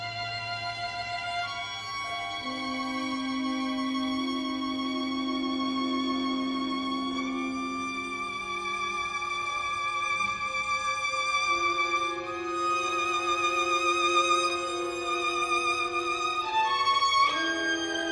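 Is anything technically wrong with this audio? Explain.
No, nothing technically wrong can be heard here.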